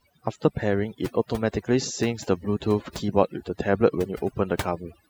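Throughout the speech, the background sinks to near silence scattered with twinkling specks. This is overdone noise removal: a reduction stage set too aggressively shuts off individual frequency bands near its noise estimate, dragging quieter voice detail down with them.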